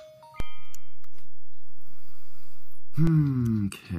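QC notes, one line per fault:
0.40–3.07 s, DC step: the waveform's zero line jumps by about -18 dBFS and holds, then returns, giving a low thump at each edge.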